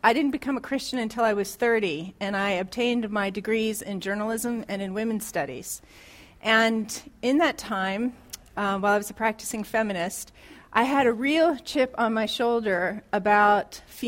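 No technical faults can be heard at any point in the audio.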